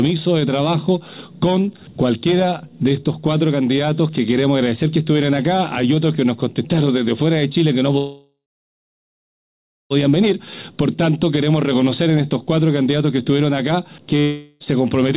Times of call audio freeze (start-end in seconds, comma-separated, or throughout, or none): 7.98-9.92